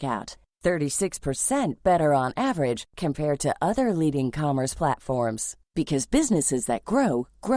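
Nothing stood out on listening to this speech recording.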